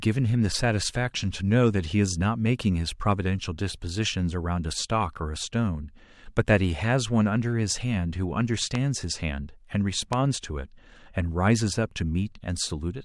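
At 8.75 to 8.77 s, a loud pop cuts through the speech. It is a single sharp crack, about 15 dB above the speech level. A second, matching pop follows at 10.13 to 10.15 s. Each lasts about 20 ms. The speech carries on underneath both. The likely cause is a sudden electrical pulse entering the signal path, such as a switch transient or static discharge. The following circuits pass it on as a brief click.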